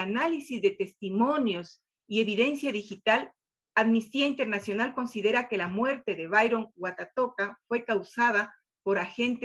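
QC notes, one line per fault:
The signal comes through an ordinary call path with Opus-style coding and a top end that stops near 12 kHz, which fits a bitrate of about 20 kbps, and nothing in it departs from what that path normally delivers.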